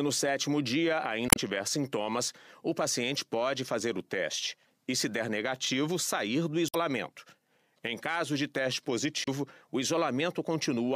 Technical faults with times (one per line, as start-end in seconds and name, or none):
1.27-1.38 damaged data in a compressed stream
6.66-6.75 damaged data in a compressed stream
9.24-9.28 damaged data in a compressed stream